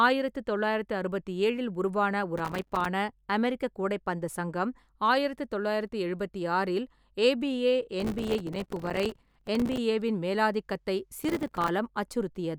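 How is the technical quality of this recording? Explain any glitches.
The recording is marred by processor overload crackle in three bursts: 2.38 to 2.86 s, 8.00 to 9.78 s, and 11.19 to 11.69 s. The processor repeatedly missed its deadlines for buffers only a few milliseconds long, and each missed buffer dropped out as a hard-edged sliver of silence. Packed densely together, these gaps tear the speech into a gritty, rapid crackle. The longest run is near 8 s, and each burst stops abruptly once the load eases.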